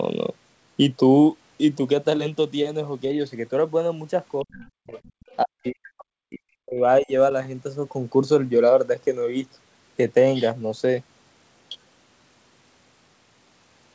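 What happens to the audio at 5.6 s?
The speech sinks sharply from 5.43 s to 6.81 s, falling by roughly 40 dB at its deepest, for about a second and a half in total. This is likely speech suppressed in double talk: with both ends talking at once, the echo canceller could not tell this talker apart from loudspeaker echo, so it pulled down the whole signal, including the near-end speech.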